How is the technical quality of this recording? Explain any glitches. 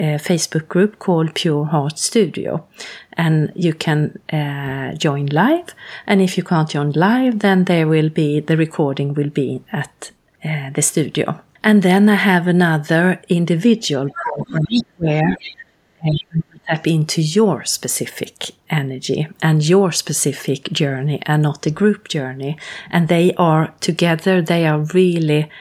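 Two echo-canceller faults mar the speech between 14.1 and 16.8 s.

The other side's voice leaks through at 14.1 to 14.22 s, 14.41 to 14.84 s and 15.33 to 15.54 s. It sits about 10 to 20 dB below the talker. The likely cause is loudspeaker sound reaching the microphone that echo cancellation failed to remove.

Speech is suppressed in double talk from 14.18 to 15.39 s and again from 15.94 to 16.78 s. The talker's voice drops by up to about 35 dB. The likely cause is the canceller muting both voices while they overlapped.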